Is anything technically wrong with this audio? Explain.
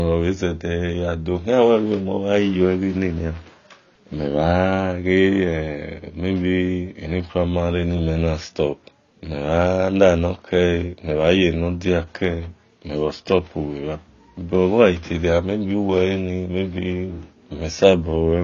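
Yes. Throughout the speech, nothing reaches above 7 kHz and the damage is plainly audible: the sound is dull and smeared, with a watery, warbling texture on held sounds and a fizzy edge on sibilants. This is likely AAC compression. The AAC-LC encoder, short of bits, drops the top band and coarsely quantises what remains, which fits a bitrate around 24 kbps. A simple low-pass filter would dull the sound just as much but leave it clean, without the warble.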